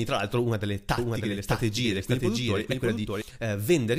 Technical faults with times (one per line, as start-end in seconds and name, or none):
0.98-3.22 doubled audio track